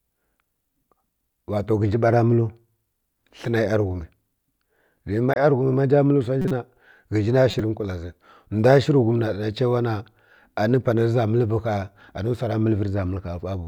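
Corrupt frame decoded at 5.31 to 5.36 s, 6.42 to 6.52 s, and 7.51 to 7.60 s, just before "nkwala zi". Flipped bits in the compressed speech stream led the decoder to misread gains and spectral codes, placing energy at wrong frequencies across a few consecutive frames each time. The damage is heard as short, loud bursts, peaking roughly 10 to 15 dB below full scale, each lasting about 50 to 100 ms.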